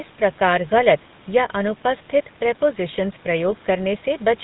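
Speech, carrying GSM full-rate codec damage from start to finish: a plainly audible buzzy, gravelly roughness as the vocal-tract model is driven by sparse, regularly spaced pulses, with nothing above 4 kHz. The sound fits a 13 kbps GSM full-rate stream.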